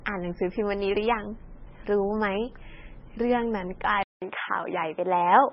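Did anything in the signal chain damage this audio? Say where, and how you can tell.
Yes, at the codec stage the whole clip has heavy MP3 compression. Nothing gets through above 5.5 kHz, and the speech sounds watery and swirly as weak frequency lines flicker between frames. That amount of damage likely points to a very low bitrate, somewhere around 18 kbps.

Then at 4.03 s the input gear changes. There's a 188 ms gap, and after it the band tops out at 3.8 kHz, so the speech goes duller and boxier. The level shifts by a few dB and a faint new noise floor comes in. That's likely the input switched to a poorer device, say a headset on its call profile, and it stays that way to the end.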